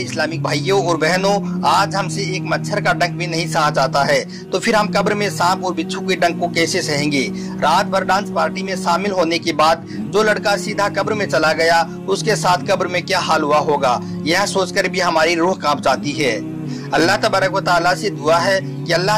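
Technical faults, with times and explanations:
No technical faults detected.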